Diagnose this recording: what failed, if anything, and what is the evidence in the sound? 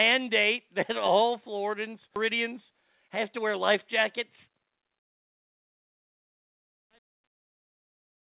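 A skip ahead occurred in the network or jitter buffer at 2.16 to 2.18 s. Something like 0.7 s of speech was discarded and the two sides were butted together with no fill. On a waveform, the envelope changes abruptly at the seam; on a spectrogram, harmonic tracks break discontinuously.

Jitter buffer speed-up runs from 2.48 to 4.63 s. The buffer was draining excess delay by cutting out short pitch-period pieces, playing at 105% speed with pitch unchanged, which removed roughly a tenth of a second in total. Speech sounds slightly hurried. The spectrogram shows compressed syllables but unchanged harmonic spacing.

Truncation distortion on a fade affects the gain stage from 4.99 s to the end. The fade-out starting near 5 s is computed at only 9 bits without dither, so it turns gritty, worst from 5.41 s. The waveform shows stair-stepped quantisation, and the spectrogram shows broadband grit below the G.711 4 kHz ceiling.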